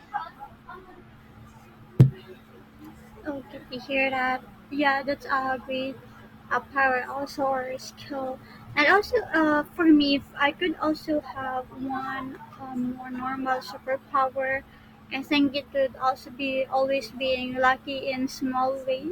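An adaptive stream at a lower bitrate is the fault in this speech recording: from 7.37 s to 11.37 s the player switched to a lower-quality version of the stream for about 4 s, most likely because the connection slowed. Through that stretch codec artefacts rise, which fits Opus dropping from about 64 to 16 kbit/s. The change happens abruptly at both ends, with no gap in the sound.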